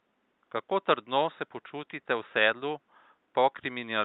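No faults in the chain; the only thing beneath the speech is the room's own background noise, about 47 dB down, which belongs to the recording.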